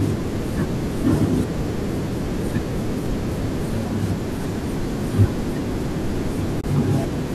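At 6.61 s there's a brief AAC frame loss with muting, a soft-faded gap of about 30 ms, which fits three short low-delay AAC frames zeroed by the decoder.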